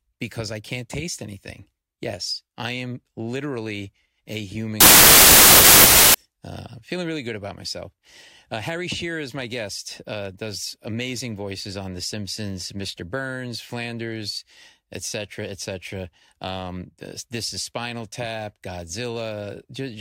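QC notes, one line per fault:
4.81–6.14 s wrong sample width: loud noise swamps the audio, with the original faint underneath, running 1.33 times fast and high in pitch. Bytes are regrouped across sample boundaries, which fits packed 24-bit data being read as 32-bit samples.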